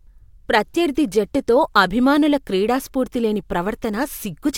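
Listening to the speech here, nothing stood out as a technical fault at any point.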